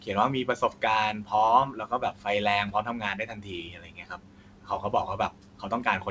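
Speech cut by the noise suppressor occurs at 0.45–0.82, 1.13–1.31, 1.72–2.26, 2.71–4.93 and 5.18–5.85 s. The suppressor mistook quieter speech for noise and pulled it down by about 12 to 13 dB. This is heaviest across 2.71–4.93 s, so consonants and endings sound swallowed. The waveform shows envelope dips, and the spectrogram shows consonant energy fading toward the room noise floor. That floor sits about 28 dB below the speech, under a G.722 band edge at 8 kHz.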